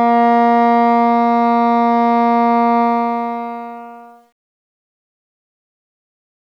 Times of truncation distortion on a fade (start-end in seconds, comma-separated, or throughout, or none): 2.81-6.58